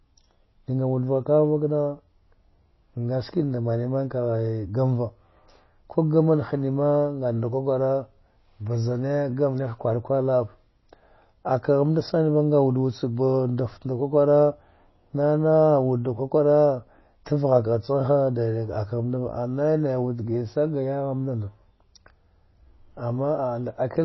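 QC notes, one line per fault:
Throughout, MP3 compression: likely a bit-starved encode fitting 24 kbps, cutting all above 5.8 kHz and flickering weak bands, so speech sounds dull and watery.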